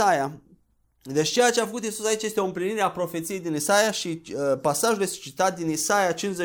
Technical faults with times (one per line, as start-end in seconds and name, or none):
none